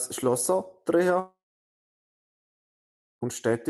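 A speech clip, band-limited near 12 kHz, which fits a call codec. A long network dropout runs from 1.19 to 3.23 s. The sound smears into a short fading buzz, then about 1.8 s of silence. It resumes with that stretch missing. The likely cause is lost packets never reaching the receiver.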